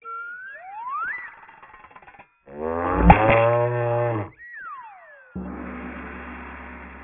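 Aliasing runs through the whole clip. Everything above about 3 kHz has folded back down into the band below it. That points to a drop to a 6 kHz sample rate with no low-pass filter in front. Content that should have been removed now lands on wrong, unrelated frequencies. The folded energy sits only moderately below the wanted sound. High, bright parts turn gritty and metallic. The spectrum stays busy right up to the 3 kHz edge.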